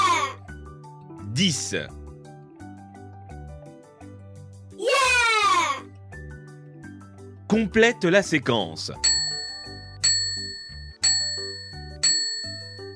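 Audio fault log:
No faults heard anywhere in this audio.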